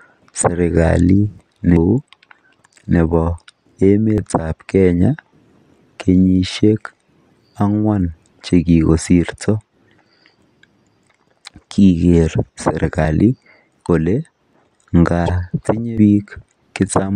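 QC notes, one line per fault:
1.77, 4.18, 13.05, 13.89 and 15.98 s: dropped buffer (overrun). The speech jumps straight ahead with no gap, losing about 150 ms at 1.77 s, about 100 ms at 15.98 s and about 50 ms at the others. That's likely samples overwritten before the program read them.
15.25 to 15.30 s: broken MP3 bit reservoir. The audio skips forward and comes back garbled for a couple of frames, which fits 26 ms MP3 frames. The likely cause is a cut frame, so the next ones borrowed reservoir bits from the wrong data.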